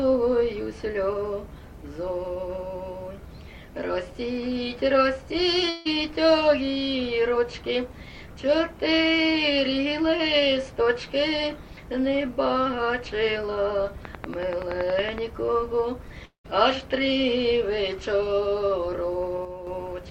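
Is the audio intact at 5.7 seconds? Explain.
No, there's a gap at 5.69 to 5.87 s, likely a long network dropout. The last sound is stretched into a fading buzz, and about 160 ms goes missing.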